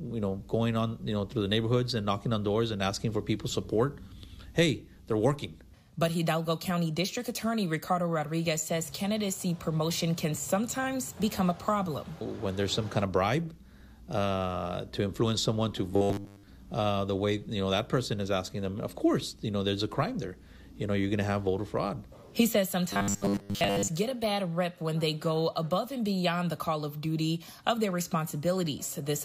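From 15.92 to 16.49 s and again from 22.91 to 23.88 s, the audio turns into a rigid metallic buzz at 100 Hz: robotic sound from repeated short buffers, likely from roughly 10 ms segments repeated for most of each stretch while the real audio is skipped.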